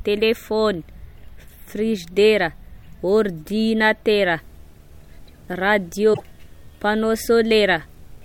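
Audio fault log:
4.07–8.24 s: video or display buzz. A steady buzz enters at 4.07 s and runs to the end of the clip, with a thin layer of hash riding above it. Its fundamental sits at 75 Hz, which matches a display's field rate rather than mains hum. It stays roughly 35 dB below the speech, so it sits under the voice as a faint, edgy drone. A screen or video cable near the audio path is coupling its scan energy into the signal.
6.10–6.21 s: damaged data in a compressed stream. For about 110 ms the speech is disrupted by a short glitch. Part of the encoded stream here is corrupt. The decoder cannot read those frames correctly, so it outputs nonsense or drops them. It then loses frame sync and hunts for the next valid frame header before normal decoding resumes. That gap and misread produce the glitch.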